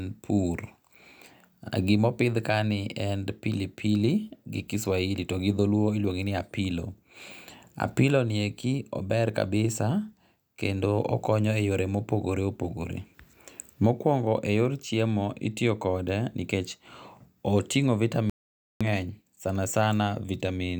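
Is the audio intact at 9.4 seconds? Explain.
Yes, at 9.4 seconds the speech plays through intact, with no audible fault at that moment.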